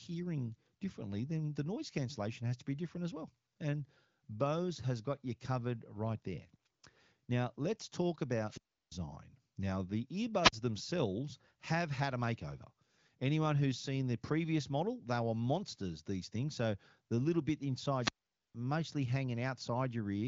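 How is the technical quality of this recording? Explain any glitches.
Three wireless microphone squelch dropouts break up this speech, at 8.44–8.93 s, 10.42–10.53 s and 17.98–18.55 s, with muted holes of about 344 ms, 43 ms and 465 ms. Each time the FM radio signal fades until the receiver's squelch shuts the output: hiss swells first, then near silence, then speech returns. That rising static before the gap separates it from a digital packet dropout, which cuts off abruptly. The audio's band, with nothing above 7.4 kHz, fits wideband telephony coding.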